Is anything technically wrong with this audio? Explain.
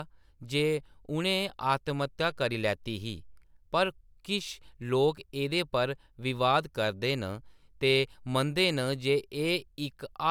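No, nothing is technically wrong with this speech recording. No fault shows up anywhere in the clip.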